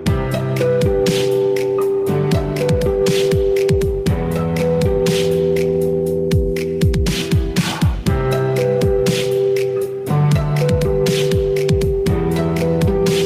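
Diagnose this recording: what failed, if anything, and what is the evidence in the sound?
Nothing failed: no stage in the chain, from wiring and conversion through transport, storage and playback, leaves an audible defect at any point in the recording.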